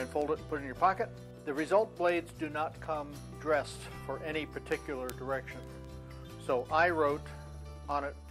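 From 0.22 to 8.29 s, word clock ticks recur about every fifth of a second: an unlocked digital link slips a sample each time, unlike random clicks.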